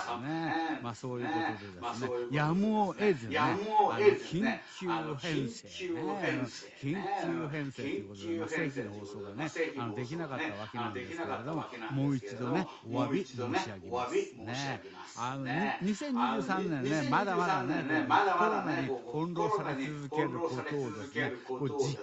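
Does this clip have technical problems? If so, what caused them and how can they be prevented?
Yes. An echo leak runs from 0.0 to 15.23 s and again from 15.4 s to the end. The speech returns about 980 ms later at roughly its own loudness, likely because a far-end loudspeaker reached the microphone and the echo canceller passed it back. Headphones or a better-tuned echo canceller would prevent it.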